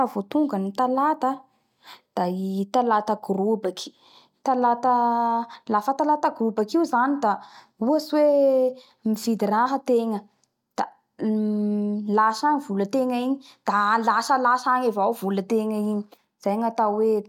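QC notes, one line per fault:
No fault to note in this speech clip.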